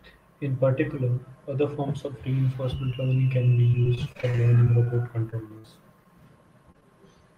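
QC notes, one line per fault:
3.71–5.66 s: repeated packet loss (robotic sound), right after "reinforcement learning can be". Fifteen gaps, the longest 58 ms, total about 240 ms of audio missing and 340 ms patched by extending prior sound, about 17% of the span, giving a choppy, robotic texture.
6.72 s: short concealed packet loss. About 20 ms never arrived in time, and the receiver bridged it with roughly 27 ms of continued prior sound before blending back, heard as a brief smear or wobble in the speech.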